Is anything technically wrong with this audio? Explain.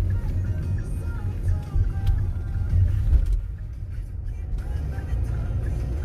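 No, nothing is technically wrong with this audio.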